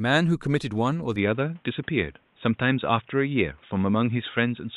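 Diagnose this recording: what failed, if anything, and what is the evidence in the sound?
At 1.16 s the speech abruptly turns dull and boxy and stays that way to the end, with nothing above 3.8 kHz, a level shift of about 5 dB, and a new, faint background noise well below the speech. This is likely an input switched to a poorer device at the capture driver stage. Tone, level and noise floor all change together with no gap at the switch, which points to a different microphone rather than a codec narrowing its bandwidth.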